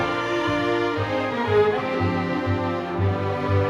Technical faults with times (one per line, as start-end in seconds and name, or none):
none